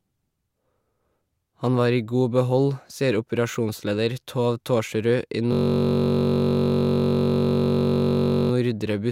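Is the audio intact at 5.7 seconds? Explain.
No. At 5.7 seconds the speech has collapsed into a steady buzz at about 46.9 Hz, lasting from 5.53 to 8.51 s. This is a system hang loop. The computer or driver stalled while the sound hardware kept replaying the same ring buffer. A single 21.33 ms slice repeats exactly, over and over, which fits a 1024-sample buffer. Because that piece is so short, the repetitions blur into a tone at the loop rate rather than a stutter.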